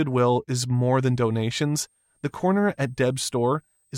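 From 0.75 s to the end, the audio carries a switching supply whistle: a high tone wandering between 8.1 and 8.7 kHz, around 45 dB below the programme. Its drifting pitch points to a power supply's burst-mode switching, unlike a fixed-frequency interference tone.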